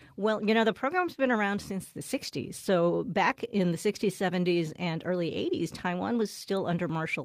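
No dropouts, glitches or distortion turn up anywhere in this recording, so there's nothing to flag.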